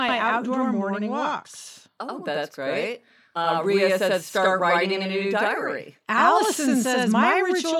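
Throughout the speech, a channel delay (doubling) is present. One channel runs about 85.33 ms behind the other, which fits a 4096-sample buffer, and when the two are summed to mono the late copy stands apart rather than blending. Every syllable is followed by a distinct slap echo at equal level, giving a doubled quality. The gap is too long to read as comb filtering.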